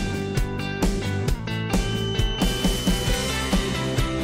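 A thin, steady whistle at about 3 kHz enters at 1.72 s and holds to the end of the clip at 4.24 s. It sits roughly 10 dB below the main sound and swells and fades slowly in level. This is a feedback whistle. The likely cause is a loudspeaker-to-microphone loop balanced just at the edge of feedback. One frequency keeps ringing there, but it never grows into a runaway howl.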